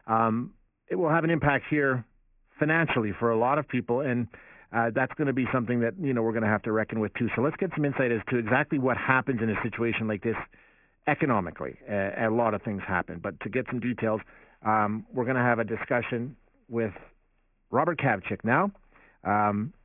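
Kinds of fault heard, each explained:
Aliasing: Throughout the speech, the sample rate was lowered without an anti-alias filter. Content above the new Nyquist limit folds back downward around 3 kHz, which fits a reduction to a 6 kHz rate. Sibilants and breathy consonants are mirrored into false, unrelated frequencies below that edge. The result is a gritty, metallic hash roughly 15 dB below the speech, with energy piled hard against the 3 kHz ceiling.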